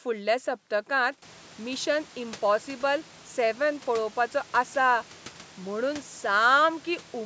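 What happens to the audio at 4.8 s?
Nothing goes wrong at 4.8 s; the speech passes through intact at that moment.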